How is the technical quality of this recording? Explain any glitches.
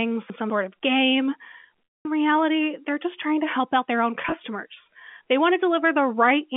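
Three glitches break up this telephone-band speech recording, which passes through G.711 A-law coding at 64 kbps and is limited to roughly 200 Hz to 3.5 kHz.

From 0.3 to 0.5 s, chunks play out of order. One 100 ms block arrived a chunk late and plays after its successor, so the sound jumbles briefly across the hard joins.

From 1.87 to 2.05 s, packet loss with pitch repetition sets in. The receiver lost about 210 ms of audio and repeated the last pitch period, so a held buzz fades into silence before the speech cross-fades back.

From 4.22 to 4.32 s, scattered losses totalling 50 ms, none longer than 20 ms, are bridged the same way. The repeated pitch cycles leave a slightly held, buzzy roughness.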